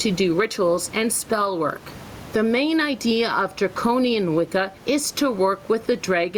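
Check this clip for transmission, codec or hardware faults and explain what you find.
One fault runs through the whole clip: gain pumping. The likely cause is input gain set far too high for the microphone, with a fast limiter or compressor clamping it down whenever the speech gets loud and releasing it in the pauses. The result is a swing of around 15 dB: the room noise sits about 29 dB below the speech, and the speech itself sounds flattened and squashed.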